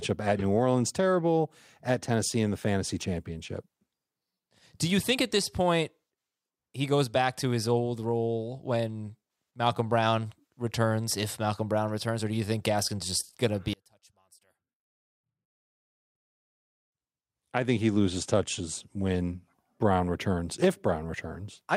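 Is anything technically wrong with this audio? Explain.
Yes. From 13.73 to 16.92 s, between "just going to be" and "I think he loses", the speech collapses by about 33 dB to a faint residue. One channel inverted is the likely cause: centred content cancels when mixed to mono. Unlike a dropout, a faint trace remains instead of silence.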